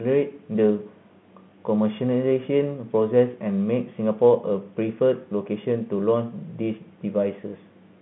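No technical fault can be heard in this speech recording. It comes through a G.711 telephone path, and the sound is confined to the line band of roughly 150 Hz to 3.5 kHz.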